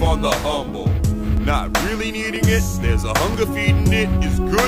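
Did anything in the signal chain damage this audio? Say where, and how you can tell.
Yes. An overlap between stream segments damaged it at the network and playback stage. Tiny skips land at 1.37, 2.36 and 3.34 s, about one second apart. Segment timestamps overlapped, so the player trimmed a few milliseconds of real sound and the waveform jumped.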